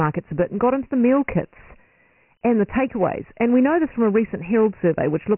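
Dialogic VOX ADPCM runs throughout the clip, from start to finish. The speech has been squeezed into 4-bit adaptive differential steps, and nothing survives above 3 kHz, which points to the 6,000-samples-per-second variant at about 24 kbps. Because each sample only records a coarse change from the last, the step size lags behind the signal, leaving heavy damage: a gritty, grainy hiss that rides on the voice and a dull, phone-line bandwidth.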